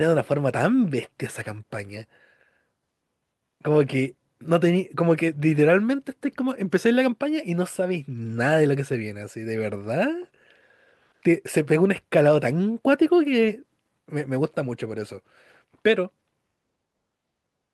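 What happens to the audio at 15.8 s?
Nothing goes wrong at 15.8 s; the speech continues intact through that moment, with no dropout, click or other fault.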